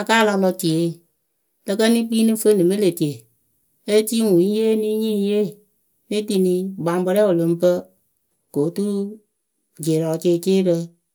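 No technical faults can be heard anywhere in the speech.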